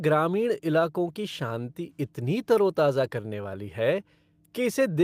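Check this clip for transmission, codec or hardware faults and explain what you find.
Nothing in this speech recording points to a transmission, codec or hardware fault.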